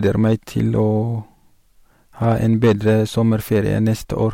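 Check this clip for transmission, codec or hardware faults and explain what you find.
Hard clipping runs through the whole clip: the speech is driven about 7 dB past what one stage can pass, so peaks are sliced flat, adding harsh crackle on the loudest syllables.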